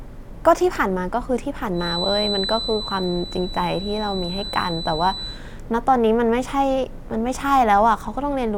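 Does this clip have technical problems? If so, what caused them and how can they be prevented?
Yes. From about 1.72 s to 5.42 s there's a feedback whistle, a thin, steady tone at 4 kHz sitting roughly 10 dB under the speech and swelling and fading slowly in level. It's likely the loudspeaker-to-microphone loop hovering right at the edge of feedback, so that one frequency keeps ringing without building up into a full howl. To prevent it, bring the monitor gain down, move the mic away from the speakers or point it away from them, and notch out 4 kHz.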